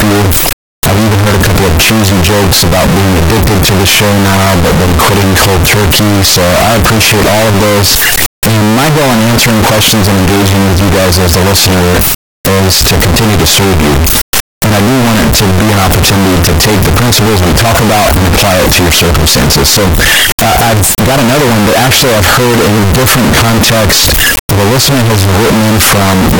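Throughout, 32-bit float samples were likely read as 32-bit integers, a float read as integer fault that makes the speech very loud, harsh and nearly square-wave, with background noise as loud as the speech.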